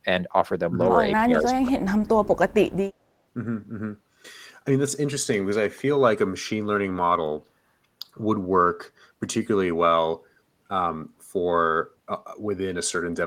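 From 1.19 to 2.56 s the echo canceller most likely faced double talk: with both ends active, it could not tell this talker from the returning loudspeaker echo and pulled the whole signal down to be safe. The result is speech suppressed in double talk, heard as the speech sinking in level, at its deepest by roughly 30 dB, with about a second of that stretch affected before the level recovers.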